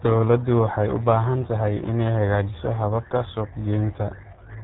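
RealAudio 14.4 codec damage runs throughout this speech: the 8 kbit/s coder removes everything above 3.8 kHz and heavily quantises what remains, leaving muffled, gargly speech.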